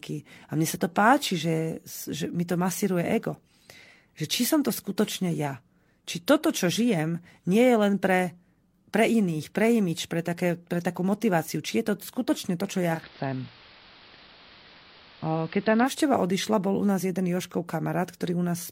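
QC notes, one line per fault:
12.92–15.93 s, digital radio blending to analogue: the receiver lost the digital stream and cross-faded within 118 ms to the station's AM broadcast, so the speech dulls, drops about 1 dB, and carries hiss roughly 25 dB down until it switches back.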